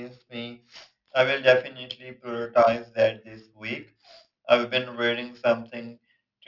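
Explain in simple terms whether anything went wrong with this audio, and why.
Yes. Aliasing runs through the whole speech clip. Hissy sounds like s and sh come out gritty and metallic because detail above about 6 kHz was folded back down into false tones, which points to a careless drop to a 12 kHz rate. Plain muffling would only dull them instead.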